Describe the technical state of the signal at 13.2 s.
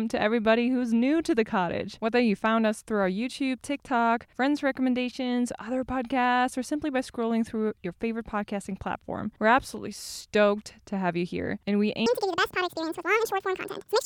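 At 13.2 s you're inside a section at the wrong speed, running from 12.06 s to the end at 1.89x, so the speech jumps about ten semitones higher and hurried, likely from a wrong playback clock.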